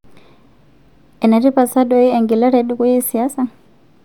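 No technical faults can be heard anywhere in the speech.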